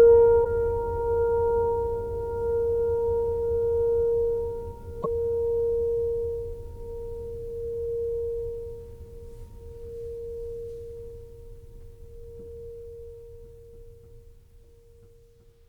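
Damaged data in a compressed stream breaks into this music twice, at 0.41 to 0.46 s and 5.00 to 5.06 s, each a brief blip of under 60 ms. Corrupted bytes there make the decoder misread frames, lose sync and hunt for the next valid header.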